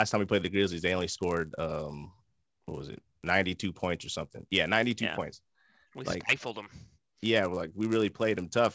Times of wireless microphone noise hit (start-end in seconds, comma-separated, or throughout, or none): none